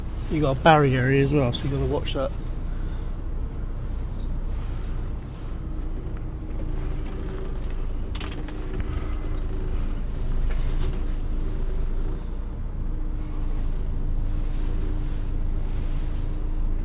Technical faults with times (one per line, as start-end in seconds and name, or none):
none